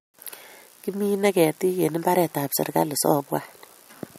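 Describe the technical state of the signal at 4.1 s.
At 4.1 s the speech signal is intact, with no dropout, distortion or other fault audible at that moment.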